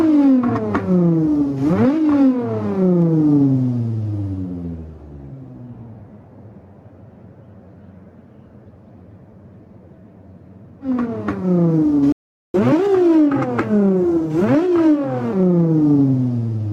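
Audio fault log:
Throughout: gain pumping. The level breathes in and out across the whole clip, with a swing of around 10 dB. Loud and soft moments sit unnaturally close in level, so the sound feels squashed. The likely cause is input gain set far too high, with a fast limiter or compressor clamping down each time the level jumps, then letting go.
12.12 to 12.54 s: playback stall. The sound cuts out in mid-flow and stays silent for about 0.42 s. Nothing fades. The output simply stops and then resumes. This points to the player running dry of audio data, or its playback thread being held up, so there was nothing to send to the output until it recovered. The gap is long enough to hear clearly as a break.
12.54 to 15.33 s: catch-up at higher speed. Right after the stall, the sound runs fast, at 1.15 times normal speed. Pitch rises with it, by about two semitones, so everything sounds slightly sped up and raised. 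The player is resampling its backlog to win back the time lost in the gap. Speed and pitch both settle back to normal at 15.33 s.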